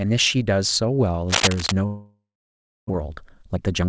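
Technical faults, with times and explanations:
1.28–1.73 s, cable scratch noise: Dense, ragged crackling sits over the speech, about as loud as the speech itself. It sounds like a likely worn cable or connector being moved, its contact resistance jumping rapidly and injecting uneven bursts of noise.
1.86–2.91 s, long network dropout: Audio stopped arriving, likely because of a network stall. The receiver first extended the last sound as a fading buzz or hiss, then left about 0.63 s of silence. Roughly 0.62 s of speech never returns, and the delay grows by around 0.4 s.
2.95–3.89 s, jitter buffer speed-up: After the gap, the backlog of late audio is drained. The receiver cuts short pitch-period pieces repeatedly, removing about 0.2 s. Speech runs at about 121% speed with unchanged pitch, so it sounds hurried.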